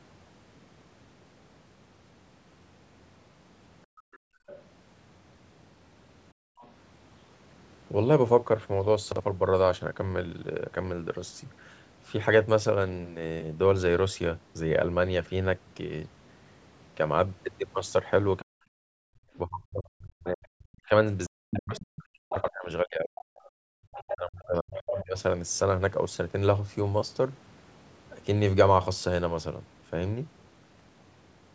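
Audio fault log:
3.86–4.47 s, 6.33–6.59 s, 18.93–19.17 s and 23.5–23.71 s, background gated by the echo canceller: the room tone under the speech sinks abruptly by about 32 to 34 dB, for roughly half a second in the first dip and a fifth to a third of a second in the others, then swells back. Each time the far end was sounding on the loudspeaker, the canceller clamped the microphone to keep that playback out, taking the ambient bed down with it until it released.
4.12–4.63 s, 6.59–6.69 s and 21.76–25.2 s, other side's voice leaking through: a second voice sits beneath the talker, faint in the first two spots at around 25 to 30 dB down, but much more present in the long stretch near 22 to 25 s, only about 10 dB under the main speech. This is likely loudspeaker playback that the echo canceller failed to subtract fully from the microphone, so residual far-end sound passes on.
9.12–9.2 s and 22.36–22.48 s, chunks out of order: a short jumbled flicker, where a 40 ms block of audio plays out of place, one block late at 9.12 s and two blocks late at 22.36 s. 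Nothing goes missing, but the late block is spliced in after material that should follow it. This creates three hard edges at each spot, and the shuffled order briefly scrambles the sound.
18.4–25.16 s, speech suppressed in double talk: across this stretch the talker's own voice repeatedly ducks, thins and breaks off in pieces, for roughly four seconds in total and as deep as about 40 dB at worst. Both ends were talking over each other here, and the likely cause is the canceller being unable to tell local speech from returning echo, so it attenuated everything, overlapping with the gating dips and the strong leakage in the same window.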